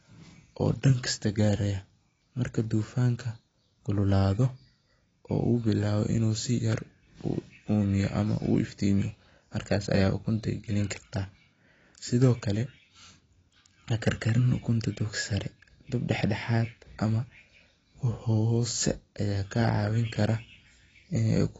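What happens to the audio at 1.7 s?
AAC compression is present at 1.7 s, as it is for the whole clip. The speech is dull and smeared, with nothing above about 7.9 kHz and a warbling, fizzy texture on sibilants, likely from AAC-LC quantising frequency bands coarsely at a low bitrate near 24 kbps.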